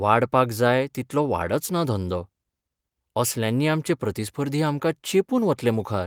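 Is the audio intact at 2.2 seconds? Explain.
Yes, the speech at 2.2 seconds plays through intact, with no dropout, click, distortion or other fault at that moment.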